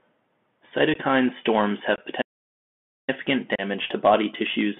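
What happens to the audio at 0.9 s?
At 0.94 s there is unconcealed Bluetooth headset packet loss: about two packets, 15 ms of speech, were replaced with silence or an idle pattern, leaving a hard-edged hole rather than a smeared or filled-in gap.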